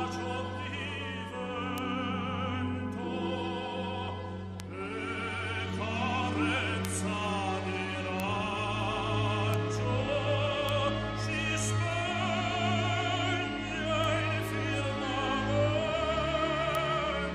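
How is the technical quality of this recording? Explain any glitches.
Eight isolated bit error spikes are audible, at 1.78, 4.6, 6.85, 8.2, 9.54, 10.69, 14.04 and 16.75 s. Each is a single sharp, broadband tick unrelated to the surrounding sound. A flipped bit in one to three samples briefly throws the value by a power of two, reaching about -11 dBFS, or about -17 dBFS at 4.6 and 14.04 s.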